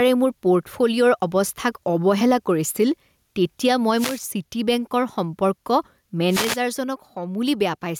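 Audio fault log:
Throughout: gain pumping. The level swings by roughly 10 dB. This likely comes from input gain set far too high, with a fast limiter clamping down on every peak and squashing the dynamics.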